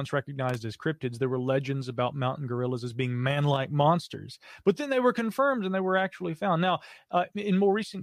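Loose connector crackle hits this speech clip from 0.49 to 0.55 s, a brief irregular burst of scratchy noise lasting about 60 ms. A worn or dirty contact is rapidly making and breaking, chopping the signal.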